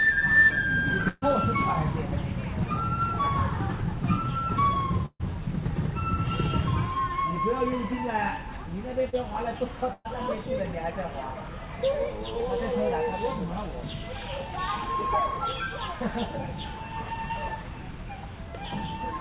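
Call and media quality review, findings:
Burst of packet loss at 1.08–1.24 s, 5.06–5.22 s and 9.93–10.07 s. Each is roughly 120–140 ms of sound held over from the last good frame and faded down, ending in a brief dropout (about 10, 50 and 20 ms), then playback jumps ahead. Component: network/jitter buffer, with decoder concealment papering over it. Mechanism: consecutive packets lost or late, so the concealment stretches the previous audio until it gives up and the real stream resumes past the hole.

Short concealed packet loss at 9.10–9.15 s. There's a quick smear lasting roughly 30–40 ms, where the decoder extended the preceding sound and crossfaded back in. Component: jitter buffer / decoder PLC. Mechanism: late or dropped packets, patched from the prior frame's content. It lands just before the third burst, so the network was probably wobbling around 9–10 s. Band tops out at 4 kHz, consistent with narrowband G.711 mu-law on the call leg.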